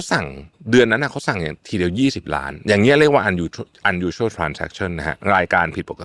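Nothing in the signal of this speech recording points to a technical problem, and nothing stands out as needing attention.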